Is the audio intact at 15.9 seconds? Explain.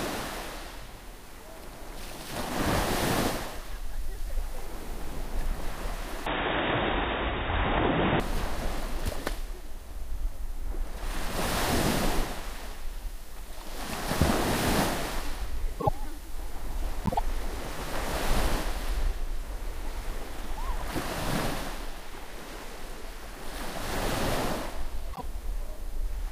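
No, frames out of order from 15.80 to 15.89 s: two neighbouring blocks of about 26 ms play swapped, giving a brief garbled flutter.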